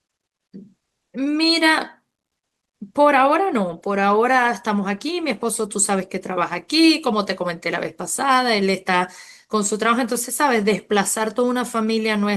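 No technical faults are audible.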